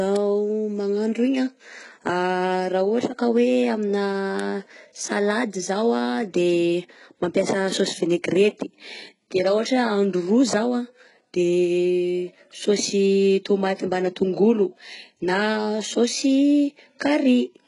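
Speech whose treble sounds synthetic throughout, with gritty, lispy s sounds, metallic brightness and nothing above 11.1 kHz, most likely from heavy HE-AAC compression. Upper bands rebuilt from copied lower ones don't match the original harmonics, which fits a very low bitrate near 12 kbps.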